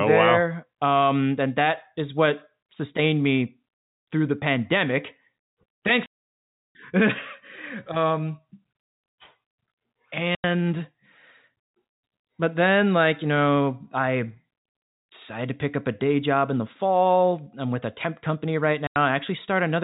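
Packet loss filled with silence cuts the speech at 6.06 to 6.75 s, 10.35 to 10.44 s and 18.87 to 18.96 s, the last just after "a temp company right". Packets never reached the receiver, so it played silence in their place. The sound drops out for 0.69 s, then twice for 0.09 s. All three lengths are multiples of 30 ms, which fits 30 ms packets. Around the holes, the speech has the narrow telephone band of G.711 coding.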